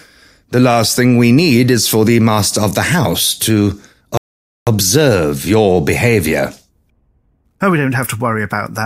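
Right after "house to", at about 4.17 s, the speech just drops into silence until 4.67 s, then carries on exactly where it left off. That's a rebuffering stall: the player ran dry and waited for more data, so nothing's missing, just about half a second added.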